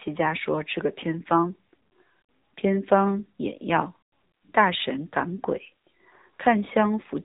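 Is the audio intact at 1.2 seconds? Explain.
No. At 1.2 seconds, as across the whole clip, the speech carries AMR narrowband mobile codec damage. The codec samples at 8 kHz and rebuilds the voice from a vocal-tract model excited by a handful of pulses per 5 ms subframe. Nothing above about 3.8 kHz survives, so the speech sounds boxed-in and telephone-like. The plainly audible buzzy, synthetic edge fits a low bitrate around 7.4 kbps.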